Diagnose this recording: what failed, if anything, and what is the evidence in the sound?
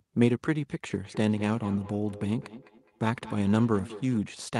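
Call processing failed: feedback echo between two devices, one replaying the other's microphone. From 1.05 to 4.23 s, speech returns about every fifth of a second, peaking about 17 dB below.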